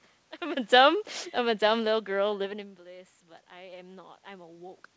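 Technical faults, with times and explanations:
0.74 to 2.39 s, automatic gain falling: just after the talker moves, around half a second in, the AGC decides things are too hot and eases its gain down by about 4 dB. You hear the voice and room noise sink together, slowly, not in one step.
2.41 to 4.97 s, automatic gain rising: the talker pulls back around 2.5 s, dropping the input by about 17 dB, so the AGC starts cranking gain back up. Voice and room background swell together over the last couple of seconds.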